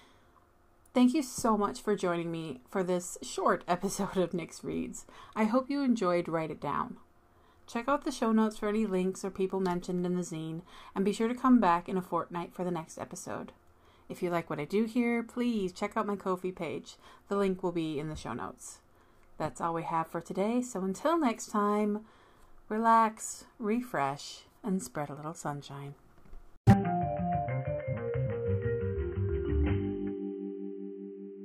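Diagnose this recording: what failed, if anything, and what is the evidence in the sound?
At 26.73 s the sound turns dull, about 10 dB quieter, with nothing above 3.1 kHz. The capture input likely switched to a poorer device.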